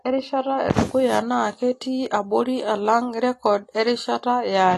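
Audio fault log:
Throughout: AAC compression is the likely cause of the dull, band-limited speech. Nothing sounds above 12 kHz, and the plainly audible smearing and artefacts come from coarse quantisation of each frame's spectrum, which fits an AAC-LC encode at a low bitrate near 32 kbps.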